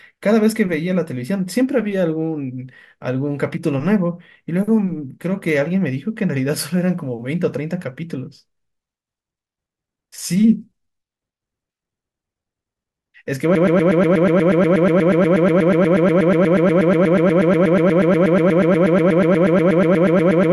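Broken-record loop, 13.55 s to the end: a 0.12 s fragment repeats endlessly, likely a stalled stream resending its last buffer, so the later audio is lost.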